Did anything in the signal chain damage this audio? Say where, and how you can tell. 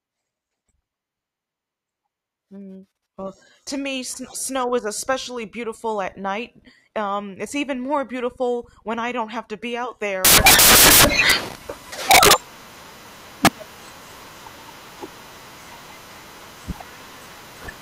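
Yes. The damage is at sample-format conversion. From 10.25 s, just after "have to be out", to the end at 17.81 s, the speech turns into loud, harsh broadband noise. Samples are built from the wrong bytes, so fast-changing low bits dominate.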